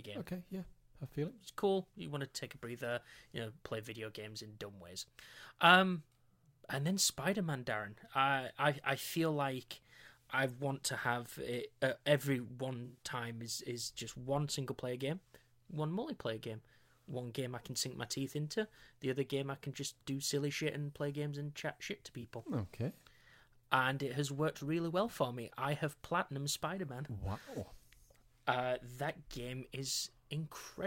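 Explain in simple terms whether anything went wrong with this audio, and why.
Two brief smeared, hazy patches interrupt the speech: at 12.85–13.02 s, right after "have it uh every", and at 22.22–22.25 s, after "and chat shit to". This is AAC frame loss with concealment: pieces of compressed audio went missing, and the player filled each gap by reusing the last good sound.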